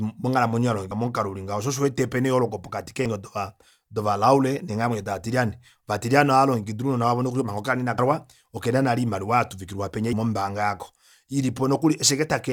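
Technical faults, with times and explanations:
0.91 s, 3.06–3.09 s, 7.98–8.02 s and 10.13 s, damaged data in a compressed stream: corrupted frames throw the decoder out of sync while it hunts for the next header, producing brief chirps or blips in the speech.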